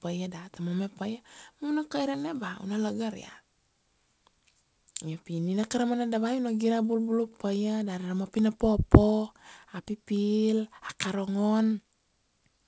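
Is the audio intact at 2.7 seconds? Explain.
Yes, the speech at 2.7 seconds is intact, carried normally through the G.722 call path, which passes nothing above 8 kHz.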